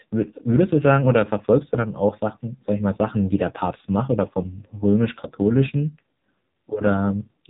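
Speech, coded throughout by an AMR narrowband mobile codec. Nothing above 3.8 kHz survives. Strong buzzy, synthetic coloring suggests a low-bitrate mode near 5.9 kbps.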